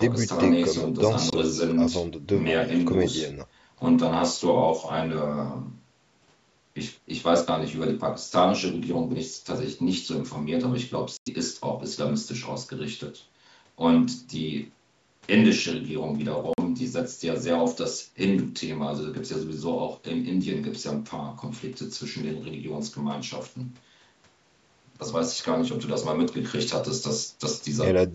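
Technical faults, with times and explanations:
1.30–1.34 s, 11.17–11.28 s and 16.53–16.59 s: Bluetooth dropout. Audio packets likely failed to reach the headphones in time and were discarded. The speech cuts to silence for about 23, 93 and 46 ms, gaps that fit one, four and two lost frames, then picks up further along as though it had kept playing.
4.03 s and 15.29 s: dropped samples. A handful of samples, likely lost from the stream, make the waveform leap straight to a later value. Far too little is missing to leave an audible gap, so each spot is heard only as a single sharp click.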